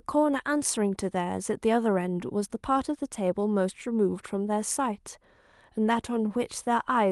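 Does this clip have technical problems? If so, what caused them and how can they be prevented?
No, no faults are audible.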